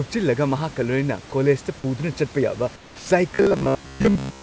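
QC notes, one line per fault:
2.76–3.10 s: sound dropped by the voice detector. Right after "ꯀꯣꯂꯦꯖꯇ ꯄꯨꯗꯨꯅ ꯆꯠꯄ ꯌꯥꯕ", 340 ms of audio gives way to flat comfort noise, with about 140 ms of actual speech lost. The likely cause is the sender's detector misjudging quiet speech as background and pausing transmission until it retriggered.
3.35–4.42 s: robotic sound from repeated short buffers. To the end of the clip, the speech turns into a rigid metallic buzz at 66.9 Hz that still loosely tracks the speech. This is likely a playout buffer repeating its last 15 ms chunk, with around 70% of the audio repeated rather than new.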